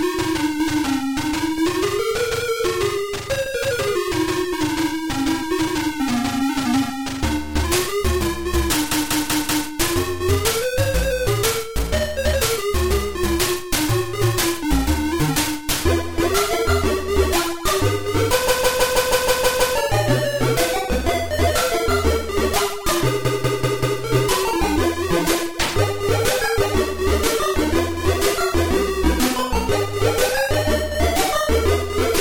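Three stutters break the audio, each one short block of sound playing over and over: a 192 ms block four extra times from 8.91 to 9.68 s, a 160 ms block eight extra times from 18.48 to 19.76 s, and a 192 ms block four extra times from 23.25 to 24.02 s. These are repeated frames. Runs of compressed frames were delivered more than once, and the decoder replayed them, adding about 2.8 s in total.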